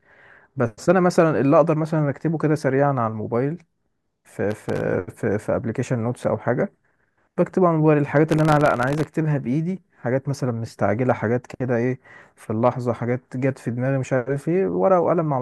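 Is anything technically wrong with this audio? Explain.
Yes. The speech breaks into processor overload crackle from 4.51 to 4.81 s and again from 8.29 to 9.07 s. The system keeps missing buffer deadlines, each under a millisecond long, dozens in a row. Each miss drops a sliver of silence with hard edges. The result is a gritty tearing that stops when the load eases.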